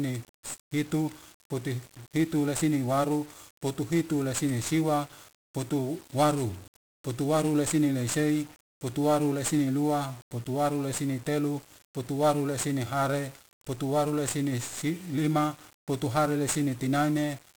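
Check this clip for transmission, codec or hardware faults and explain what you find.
One codec fault runs through the whole speech clip.

1-bit DFPWM compression, throughout: each sample is a single bit nudging an adaptive level up or down. Heavy broadband quantisation noise results, leaving the speech fuzzy and crackly, with treble smothered in hiss, which fits a one-bit stream near 48 kbps.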